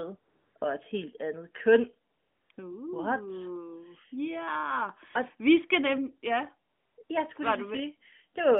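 Speech over a narrowband AMR phone line (roughly 150 Hz to 3.5 kHz) has AMR comfort noise in six pauses: 0.20–0.56 s, 0.58–0.62 s just before "et helt andet køn", 2.10–2.50 s right after "et helt andet køn", 2.52–2.58 s, 6.70–6.98 s, and 7.04–7.10 s after "vi skal nemlig ja". The sender judged these gaps silent and stopped transmitting speech frames, so the receiver filled them with smooth synthetic hiss. That noise switching in and out is what tells it apart from a dropout or noise gate, which would leave dead silence.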